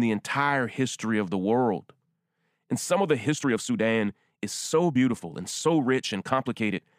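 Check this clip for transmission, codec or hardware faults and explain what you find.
One fault is present. From 3.21 s to the end at 6.99 s the speech runs as a time-stretched section, played about 1.36 times faster while its pitch stays put. The likely cause is software squeezing the audio to fit a length by dropping short segments, which makes the delivery sound rushed.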